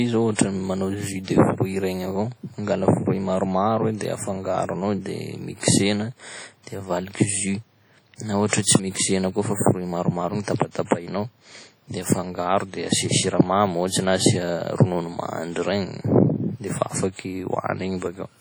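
Throughout the 18-second speech recording, heavy transform-coding damage is audible: a ringing, washy texture with hiss that swells and fades with the signal. The likely cause is WMA compression, and the extent of the damage points to a low bitrate of around 32 kbps.

At 10.44 to 10.48 s and again at 10.85 to 10.91 s, pre-echo appears. Quantisation noise spread across each coding block leaks into the quiet moment before a sharp attack, producing a 34 ms and then a 55 ms smear of hiss that softens each onset.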